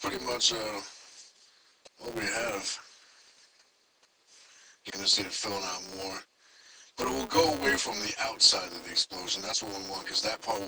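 A filter restarted on every block is at fault for the whole clip: instead of carrying its internal state across block boundaries, the filter resets and starts each block from silence, so every block opens with a small transient. Those transients arrive every 5 ms, and together they form a steady buzz at 200 Hz laid over the audio. The buzz rises and falls with the signal's level, growing stronger in louder passages and receding in quieter ones.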